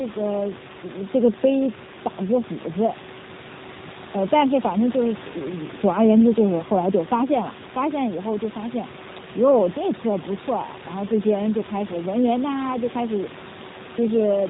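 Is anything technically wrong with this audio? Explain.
Yes. Throughout the whole recording, the speech has passed through a G.729 codec. Its character points to the low-complexity G.729A variant at around 8 kbit/s. Rather than sending the waveform, the encoder sends a vocal tract filter, a pitch predictor and a few pulses per 5 ms half of each 10 ms frame, and the decoder rebuilds speech from those. The damage is plainly audible: nothing passes above 4 kHz, so the speech sounds muffled. Voiced sounds come out slightly rough and synthetic, and the room noise, sitting about 19 dB below the speech, warbles because the model cannot represent it cleanly.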